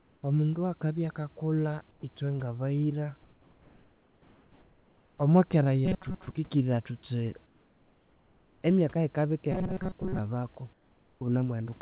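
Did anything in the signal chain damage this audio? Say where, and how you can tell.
Yes. In the pauses the real room background is replaced by comfort noise: flat, featureless hiss, about 1 to 4 dB quieter, at 0 to 0.23 s, 1.91 to 2.03 s (between "akabya akakulha" and "ithwe ngabayira"), 3.23 to 5.18 s, 7.46 to 8.63 s and 10.73 to 11.21 s. That's likely call-processing DTX muting the sender and the receiver synthesising filler.

The robotic sound from repeated short buffers shows up at 5.86 to 6.36 s and 9.52 to 10.19 s as a metallic 188 Hz buzz. Roughly half the first stretch and most of the second are repeats. The cause is likely a starved jitter buffer looping about 5.3 ms chunks.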